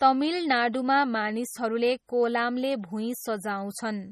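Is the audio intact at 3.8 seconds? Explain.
No. At 3.8 s the speech carries the same MP3 compression damage heard through the whole clip, likely from encoding at a low bitrate, around 32 kbps by the sound. The heavy artefacts are a watery, swirly sound, metallic chirps on s sounds, and smeared onsets. Short of bits, the encoder dropped everything above 15 kHz and zeroed weak frequency lines frame by frame. A spectrogram shows a hard ceiling at 15 kHz with flickering, patchy holes below it.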